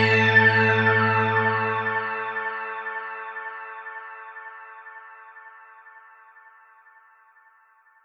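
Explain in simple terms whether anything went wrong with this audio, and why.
Nothing went wrong; no technical faults can be heard.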